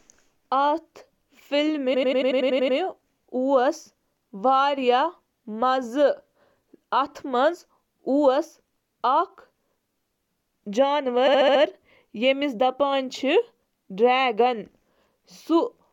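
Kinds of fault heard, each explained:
Repeated frames: The same short chunk of compressed speech replays several times, stuttering with 93 ms blocks from 1.93 to 2.77 s and 70 ms blocks from 11.26 to 11.61 s.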